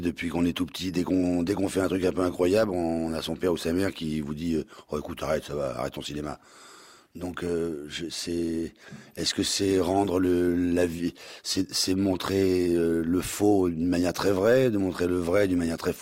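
No technical faults can be heard anywhere in this recording.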